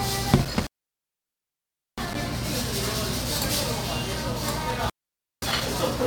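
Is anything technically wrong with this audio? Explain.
Yes, there are two intermittent contact faults, at 0.42–2.22 s (about 1.31 s open) and 4.70–5.61 s (about 0.52 s open). A loose connection breaks the signal path, so the audio drops to faint hiss, with crackle at each edge.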